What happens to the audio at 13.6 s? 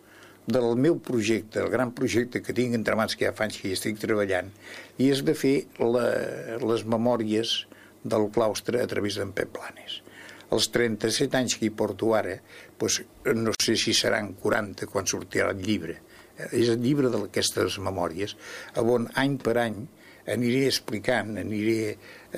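A short hole of silence, about 49 ms long, opens in the continuous sound from 13.55 to 13.60 s. Its edges are smeared by the codec, and the sound then resumes exactly where it stopped. This is a gap at a join of encoded pieces: two separately encoded segments were butted together untrimmed, so the first one's padded final frame and the next one's start-up delay both remain as dead air at the seam.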